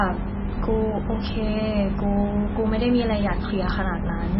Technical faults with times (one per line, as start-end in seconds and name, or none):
0.00-4.40 MP3 compression